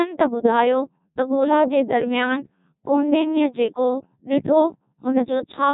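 From start to finish the speech has that robotic, buzzy quality you get from the Codec 2 vocoder, and the damage is heavy. The decoder isn't reproducing the original waveform at all. It rebuilds the voice from sine waves using just pitch, voicing, energy and a rough spectral envelope, so everything sounds synthetic. The coarseness points to one of the lowest rates, something like 1.2 kbit/s, and nothing comes through above 3.8 kHz.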